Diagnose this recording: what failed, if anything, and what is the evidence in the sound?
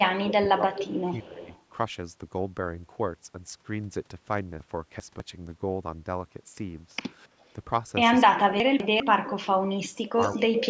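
The speech dips about 15 dB over 0.0–1.5 s, briefly about 10 dB at 7.27–7.35 s, and up to about 30 dB across 8.28–10.61 s. That's likely speech suppressed in double talk: the call processing's echo canceller ducked everything while both sides talked.

A delayed copy comes back at 0.78–1.62 s (304 ms, about 10 dB down), 9.30–9.34 s, and 10.09–10.67 s (343 ms, about 5 dB down). That's likely an echo leak from a loudspeaker end whose canceller let residue through.

Chunks out of order at 4.6–5.2 s and 8.6–9.0 s give jumbled moments. These are 200 ms blocks landing one or two slots late, a buffer or network delivery problem.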